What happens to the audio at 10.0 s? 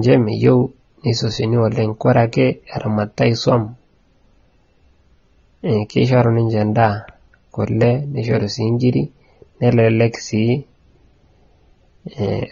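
At 10.0 s the speech is dull and smeared, with nothing above 7.5 kHz and a watery, warbling edge on sibilants. This runs through the whole clip and points to low-bitrate AAC compression, likely AAC-LC around 24 kbps discarding and coarsely quantising high-frequency detail.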